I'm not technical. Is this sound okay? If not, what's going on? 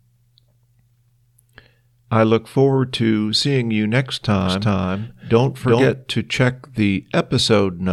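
No. From about 4.41 to 5.93 s, right after "to seeing you next", you'll hear a doubled audio track: the speech plays twice, the second copy just as loud and trailing by roughly four tenths of a second, so it sounds like an echo with no room to it. It cuts in and out suddenly, stopping before "to check." The likely cause is the audio getting recorded a second time through a slower route, or an edit leaving two copies slightly out of step.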